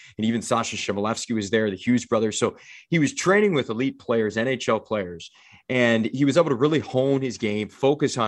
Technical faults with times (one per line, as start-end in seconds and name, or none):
none